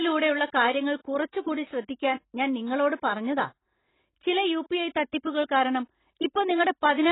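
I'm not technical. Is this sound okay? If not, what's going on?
No. AAC compression damage runs through the whole clip, from start to finish. The speech sounds dull and muffled, with nothing above about 3.9 kHz, so crisp sounds like s and t lose their edge and turn smeared or fizzy. This is likely a file squeezed too hard by an AAC encoder: to save space it throws away the higher, finer detail first, and what remains gets a warbly, underwater texture.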